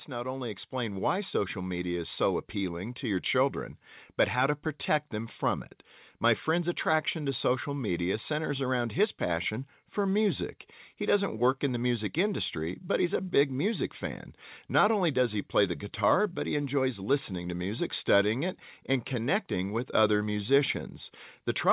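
Automatic gain rising runs from 0.07 to 5.41 s. The gain control judged the incoming speech too quiet and raised its level by about 6 dB, so the voice and the background noise swell together, while the band stays capped near 4 kHz, consistent with a G.711 call path.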